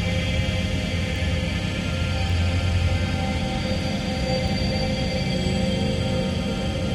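At 1.16 s, 2.30 s and 4.48 s the sound carries a bit error spike, heard as a single sharp, broadband tick with no relation to the surrounding audio. A flipped bit in one sample word makes its value jump by a power of two before the next sample returns to normal, so each spike peaks at about -21 dBFS. The first two last a single sample; the third is slightly wider, spanning three adjacent corrupted samples.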